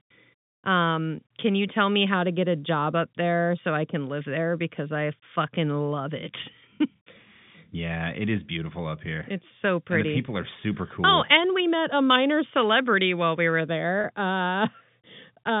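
At 14.01 to 14.04 s, just after "celebrity while we were", there is packet loss with pitch repetition. About 30 ms of speech went missing, which fits one lost packet. The receiver repeated the last pitch period to fill it, so the speech briefly holds on a buzzy, sustained tone before carrying on.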